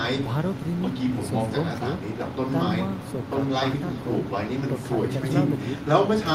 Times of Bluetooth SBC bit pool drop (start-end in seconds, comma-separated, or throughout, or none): none